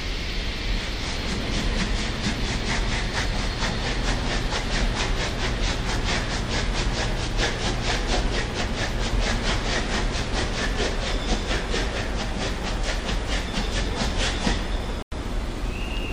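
At 15.03 s a corrupt frame is muted until 15.12 s. The decoder rejected a damaged compressed frame, leaving an abrupt silent hole that fits a single lost frame.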